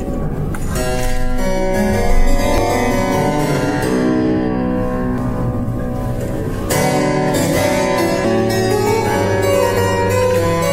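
Damaged data in a compressed stream causes brief glitches at 2.58, 5.18 and 8.25 s, where corrupted frames made the decoder misread the audio and resync. On a spectrogram each appears as a thin broadband vertical streak; the waveform shows a sudden discontinuity.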